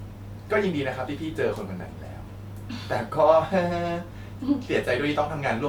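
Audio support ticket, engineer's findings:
No fault found on listening to the speech clip. Nothing heard that points to a failing component anywhere in the chain.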